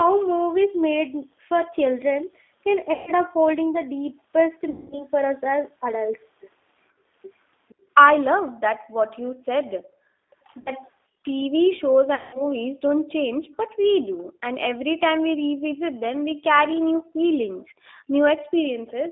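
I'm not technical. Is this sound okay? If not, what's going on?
No. This is speech, and it has several problems typical of an internet phone call.

The whole clip goes through the G.729 codec, a low-rate phone codec that squeezes speech hard. It doesn't store the sound itself. It sends a rough recipe for the voice, and the receiving end rebuilds it. That's why the voice sounds a bit rough and synthetic. It also sounds boxed-in: almost nothing above about 3.6 kHz gets through, and little below 250 Hz.

There are four spots with VoIP packet loss concealed by the speech codec: 2.93 to 3.12 s, 4.70 to 5.04 s, 10.61 to 10.72 s, and 12.15 to 12.43 s. Pieces of the call went missing in transit, from 60 ms up to 200 ms at a time. The receiver guessed by stretching the last sound it had. So you hear a buzzy, smeared tone that fades, and the voice stays weak for a moment afterwards.

Three times the background gets gated by the echo canceller: 6.91 to 7.05 s, 8.81 to 8.96 s, and 17.7 to 18.53 s. 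The room sound suddenly dips or vanishes, then comes back. The echo canceller is the part that stops a loudspeaker from being heard back through the microphone. Here it turned the microphone down sharply, sometimes almost to silence.

Between 10.31 and 11.34 s there is a faint echo leak. A quiet copy of the voice comes back about half a second late. This is likely because one side was on speakerphone, and its echo canceller didn't remove everything the microphone picked up. The copy is faint, and it may sound thin or broken.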